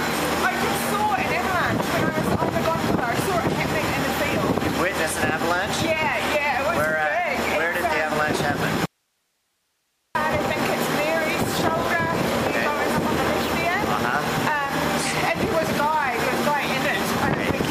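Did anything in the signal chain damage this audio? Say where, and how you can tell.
Yes. There is an audio dropout to a faint residue from 8.86 s to 10.15 s, about 1.3 s long. The sound cuts out abruptly mid-flow and returns just as suddenly, and the gap holds only hiss roughly 50 dB below the normal level rather than true silence or a fade. Because the downstream path stayed live, the stage is likely the analogue wiring, where an intermittent connection broke the signal ahead of an active preamp.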